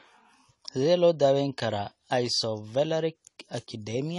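Likely low-bitrate AAC compression, consistent with AAC-LC at around 32 kbps, runs through the whole speech clip: the encoder discards everything above 11.5 kHz and coarsely quantises what remains, leaving the speech plainly dull, smeared and warbling, with fizzy sibilants.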